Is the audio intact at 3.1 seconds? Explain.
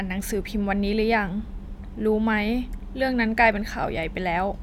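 Yes, at 3.1 seconds the audio is intact, with no dropout, click, distortion or other fault in the speech at that moment.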